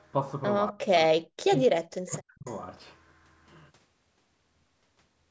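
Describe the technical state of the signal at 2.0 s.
At 2.0 s you're right in the middle of a dip from 1.69 to 2.46 s where the speech sinks, at its deepest by something like 40 dB, with the affected stretches adding up to roughly 0.7 s. That's speech suppressed in double talk, likely the echo canceller hearing both sides at once, failing to tell the near talker from the loudspeaker echo, and clamping down on everything, including the speech you actually want.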